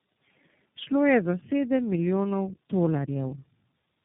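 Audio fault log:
throughout tandem speech coding: the speech sounds rough, muffled and warbly, with nothing above 3.8 kHz. The sound points to three low-rate speech coders in a row, such as two passes at around 7 to 8 kbit/s and a final one near 15 kbit/s, with plain telephone-band links between them. Each coder rebuilds its input from a simplified model, so the next one receives an already damaged signal. The errors pile up into this smeared, unsteady tone.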